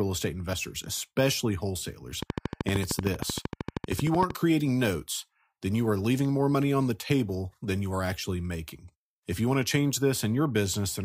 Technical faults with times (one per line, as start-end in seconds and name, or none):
0.52 compressed frames skipped
2.23-4.31 train of clicks